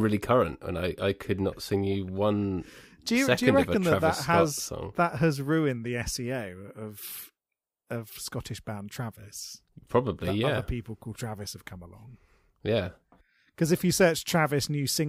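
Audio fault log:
No faults heard.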